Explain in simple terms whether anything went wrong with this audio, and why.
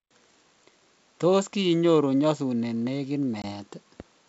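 At 3.42 s there is packet loss on an ADPCM call. About one packet, 20 ms of speech, drops to silence, and the decoder briefly loses its place. The wideband G.722 coding around it stays clear.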